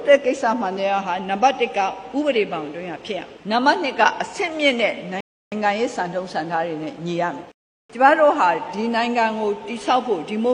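At 5.21 s the audio stops dead and stays silent until 5.52 s. This is a rebuffering stall. The player ran out of downloaded audio and paused while waiting for more. The sound then picks up exactly where it left off. A second stall follows at 7.52 s and lasts until 7.90 s. The two stalls add about 0.32 s and 0.38 s of silence. The pauses stretch the timing, but no audio is skipped.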